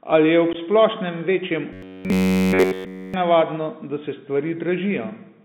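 Throughout the clip the speech passes through a Bluetooth CVSD headset codec, which encodes the sound one bit at a time as up or down steps whose size adapts. The sound fits a 64 kbps link, and the band is squeezed to roughly 150 Hz to 3.7 kHz, so everything above that is missing. The damage is plainly audible: sibilants turn scratchy, loud bright passages break up where the steps can't keep pace, and a grainy hiss sits under the voice.

From 0.53 to 0.56 s, just before "splošnem večjem", there is unconcealed Bluetooth headset packet loss. Roughly two packets' worth of audio, about 15 ms, failed to cross the radio link and nothing was substituted for them. The result is a short, hard-edged gap that can click at its boundaries, with the voice briefly dipping in level as the CVSD decoder recovers.

From 1.73 to 3.14 s, right after "ob splošnem večjem", the voice becomes a robotic sound from repeated short buffers. 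The likely cause is that fresh audio stopped reaching the playback side in time, so a very short stretch was looped again and again, and all of this span is repetition. Each loop lasts about 10.7 ms, which imposes a fixed buzz at about 94 Hz. The voice turns into a rigid, metallic drone that only loosely tracks the speech.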